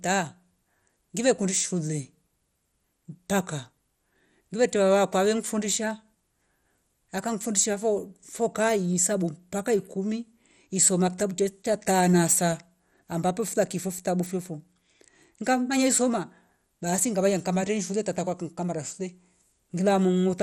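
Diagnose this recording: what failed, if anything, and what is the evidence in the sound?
Throughout the speech the sound is dull and granular, with a gurgling, watery distortion riding on the voice and nothing above about 17.3 kHz. That points to the codec stage, likely MP2 compression at a low bitrate, which fits around 64 kbps. Layer II divides the spectrum into 32 sub-bands and shares out a fixed bit budget. When bits run short, upper bands drop out or flicker and the surviving ones are quantised coarsely, producing this grain.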